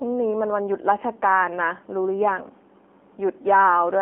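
AMR narrowband mobile codec damage runs throughout: the speech is confined to roughly 250 Hz–3.4 kHz and sounds buzzy and synthetic, which fits a low rate near 7.4 kbps.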